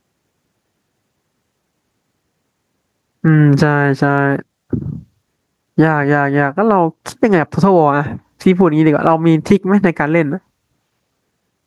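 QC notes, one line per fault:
Throughout, gain pumping: a breathing rise and fall of around 15 dB that tracks the talker's level. Loud and quiet syllables sit unnaturally close together, so the speech sounds squashed and flat. The likely cause is input gain set far too high, with a fast limiter or compressor clamping down on each loud moment and releasing in the gaps.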